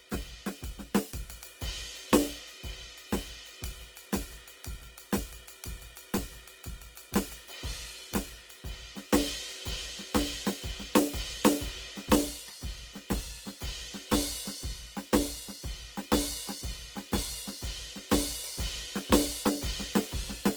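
Throughout, tones sound grainy and rough while content still reaches about 20.2 kHz, likely Opus compression near 16 kbps, noise-filling bands rather than leaving MP3-style swirling holes.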